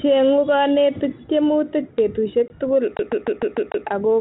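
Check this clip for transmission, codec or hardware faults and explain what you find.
Two faults are audible in this speech, carried over what sounds like 32 kbit/s G.726 ADPCM with light codec grain.

Packet loss on an ADPCM call, 2.48 to 2.50 s: about one packet's worth, 20 ms, drops out as a hard-edged silent gap. The receiving decoder's adaptive predictor and step size lose track of the sender's, so the speech resumes slightly distorted before settling.

CD stuck on one turn, 2.97 to 3.87 s: a scratch kicks the laser back to the same point each rotation, so a 0.15 s slice of speech replays six times. Each jump brings a short mute, producing the fast, regular stutter of a skipping disc.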